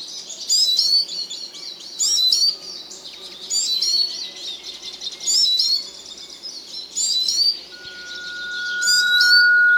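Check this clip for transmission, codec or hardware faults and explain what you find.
Two faults are present, both near the end of the clip.

From 7.72 s to the end, a loudspeaker feedback squeal appears. A single 1.4 kHz tone swells over roughly a second and a half to about 10 dB above the sound. The microphone is picking up its own loudspeaker, and at that frequency the loop gain has passed one, so the tone keeps feeding itself.

At 9.06 s, during the squeal, repeated frames cause a brief stutter. A 46.4 ms stretch plays twice, which points to two compressed frames being written or sent again. The decoder repeats them, so the clip runs 46.4 ms longer than it should.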